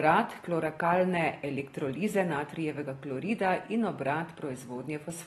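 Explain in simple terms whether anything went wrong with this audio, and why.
Something did go wrong: the speech is affected by AAC compression from start to finish, most likely a low-quality AAC-LC encode. Nothing survives above about 12.4 kHz, so the crisp top end is gone and the voice sounds dull. The encoder also had too little data to describe every detail, so it dropped or roughly approximated parts of the sound, leaving a plainly audible smeared, warbly or fizzy texture, clearest on hissing consonants and held vowels.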